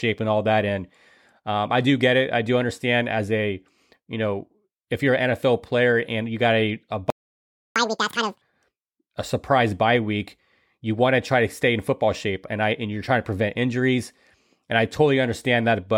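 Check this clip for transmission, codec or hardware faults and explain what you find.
Two playback faults sit back to back in this speech clip, both around the 7 to 8 second mark.

The first is a playback stall from 7.10 to 7.76 s. The speech stops dead mid-flow and the output goes silent for about 0.66 s. Nothing fades; the sound simply halts, then resumes. The likely cause is the player starving for data, or its audio thread being blocked, so nothing reached the output until it recovered.

The second is catch-up at higher speed, from 7.76 to 8.42 s. Right after the gap the speech runs at double speed. Pitch jumps by roughly ten semitones, giving a chipmunk quality. The player is resampling its backlog to recover the lost time, which raises speed and pitch together. After about 0.66 s the time is recovered, and speed and pitch drop back to normal.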